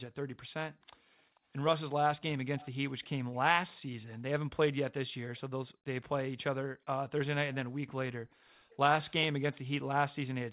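Background gated by the echo canceller, 0.79 to 1.16 s: the canceller turns the microphone down hard while the far-end loudspeaker plays. The room sound dips briefly, by up to about 40 dB, then returns as the canceller releases.

Echo leak, 0.82 to 1.4 s: a faint copy of the speech trails 0.44 s behind, about 40 dB down. It is likely residue from the far side's loudspeaker that its echo canceller failed to remove from the microphone pickup and sent back.

Echo leak, 2.59 to 5.4 s: the same 0.44 s echo returns much stronger, about 20 dB below the speech. It is narrowband, like the rest of the telephone-band audio, which stops at 4 kHz.

Background gated by the echo canceller, 5.74 to 8.53 s: the background drops out for roughly 0.7 s in total, again up to about 40 dB deep.

Echo leak, 8.31 to 9.61 s: the delayed copy comes back at about 25 dB down.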